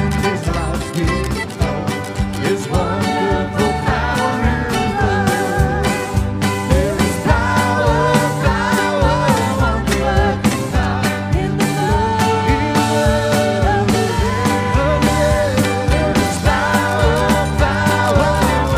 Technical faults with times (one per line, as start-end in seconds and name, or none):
none